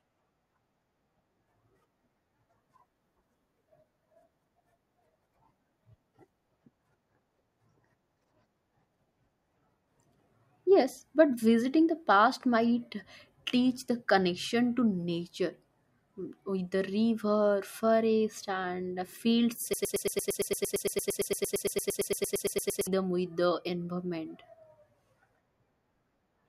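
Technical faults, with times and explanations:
19.74 to 22.87 s, broken-record loop: right after "river forest and field", a tiny 114 ms fragment stutters back to back 27 times, giving a rapid mechanical chatter for about three seconds before the sound resumes at "with the environment". The repeats are identical, and whatever should have played in that stretch is gone. This is likely a stall in the player, encoder or stream that kept resending the last short chunk it held.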